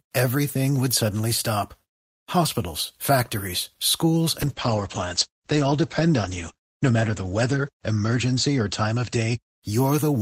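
From 4.43 s, just after "factories schools", to the end, a call bitrate drop starves the encoder. The sound turns rough and watery and loses everything above 8 kHz. Unlike packet loss, nothing drops out, which fits a fall to around 11 kbps.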